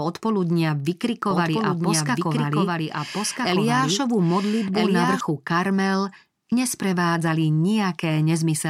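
From about 1.3 s to 5.2 s there's a doubled audio track: a second full copy of the speech runs roughly a second and a half behind the original, sitting around 5 dB quieter. It's clean and full-band, with no decay or room colour, so it doesn't sound like an echo. It's more like two takes talking over each other. It cuts in and out abruptly at both ends. The likely cause is a second, slower capture path or an edit leaving two out-of-step copies.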